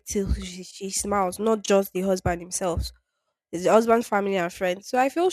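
A block size mismatch (truncated) runs through the whole speech clip, from start to finish. One processing stage hands over blocks slightly longer than the following stage takes in, so the tail of every block is discarded. Each cut lands at the block boundary and leaves a small discontinuity, and these repeat as a steady 100 Hz buzz under the speech, which suggests blocks about 10 ms long. Very little is lost per block, so the speech keeps its normal pace and pitch.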